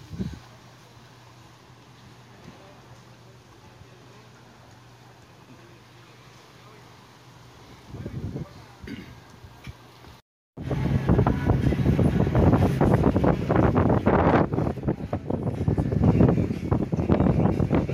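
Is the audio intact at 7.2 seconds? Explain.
Yes, the audio is intact at 7.2 seconds, with no dropout, click, distortion or other fault at that moment.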